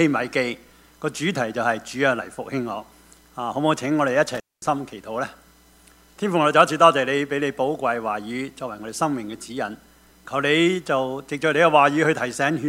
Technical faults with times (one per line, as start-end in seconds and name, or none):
4.35-4.67 intermittent contact